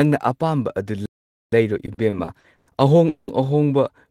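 Right after "ꯑꯄꯥꯝꯕ ꯑꯗꯨ", at 1.06 s, the speech just drops out. That's a playback stall, with nearly half a second of dead silence until 1.52 s. It's likely the player ran dry of data or its thread got blocked, and then it picks up again.

From 1.86 to 2.70 s you get repeated stalls (stutter), with six short hiccups ending just before "ꯑꯍꯣꯡ ꯑꯍꯣꯡꯕ". Packets kept arriving late, the jitter buffer kept emptying, and the receiver stretched the last sound to cover roughly a third of that stretch. The longest gap is 110 ms. Nothing's lost, but it drags.

Then at 3.09 to 3.31 s there's a call audio freeze. For 190 ms the last bit of sound is held as a fading buzz or hiss rather than silence, likely because packets were held up in transit. The speech then resumes where it left off, 190 ms later than before.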